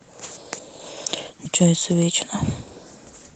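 At 1.45 to 1.47 s a skip ahead occurs: roughly 0.7 s of speech is missing, and the two sides are butted together with no silence or fill, so the talker seems to jump forward mid-phrase. The stored audio was discarded rather than played, most likely by a jitter buffer shedding backlog, and the call's delay drops by about the same amount. Across the join, the audio stays limited to about 8 kHz, as expected from the Opus call path.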